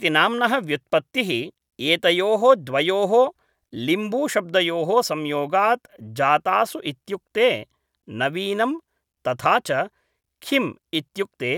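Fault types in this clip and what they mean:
No audible faults present.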